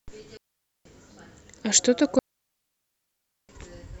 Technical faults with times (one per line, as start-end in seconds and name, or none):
0.37-0.85 digital wireless dropout
2.19-3.49 digital wireless dropout